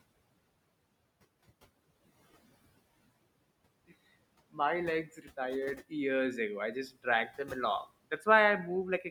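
A DC offset runs through the whole recording. The waveform sits shifted off zero by a constant amount, so it cannot be heard as a sound of its own. What it does is take away headroom on one side of the signal. It also shows up as fixed energy at zero frequency. That sets it apart from low rumble or hum, which move or sit at a pitch and can be heard.

Noise suppressor artifacts are also present from start to finish. The suppressor pulls the room noise down by about 20 dB in the pauses and lets it come back up under the speech. The room noise itself sits about 17 dB below the speech. That pumping, which follows the speech, is what separates it from codec smearing, which does not track the pauses.

Speech cut by the noise suppressor happens four times. At 5.05 to 5.38 s, about a fifth of a second is pulled down by as much as about 12 dB. At 6.74 to 7.06 s the drop reaches about 17 dB. At 7.27 to 7.51 s it reaches about 11 dB, and at 8.11 to 8.27 s about 8 dB. 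In each case the suppressor mistook soft speech for noise, so sounds come out faint or swallowed. Unlike a dropout or lost packet, these are ducked, not replaced by silence or a click.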